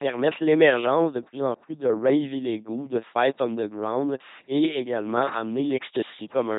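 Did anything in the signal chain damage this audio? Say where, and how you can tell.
Yes, at the codec stage, throughout. The speech has the buzzy, robotic character of an LPC-10 vocoder: each moment is rebuilt from a ten-pole filter fed by pulses or noise, so it snaps between buzz and hiss. Nothing survives above 3.9 kHz, consistent with 2.4 kbit/s coding.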